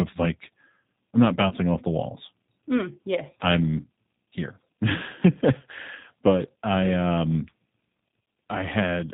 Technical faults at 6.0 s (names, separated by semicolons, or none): G.729 codec; VoIP packet loss concealed by the speech codec